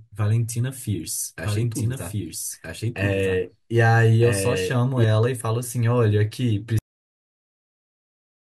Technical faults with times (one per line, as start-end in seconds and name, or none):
1.40-5.04 doubled audio track
6.79-8.41 cut-off end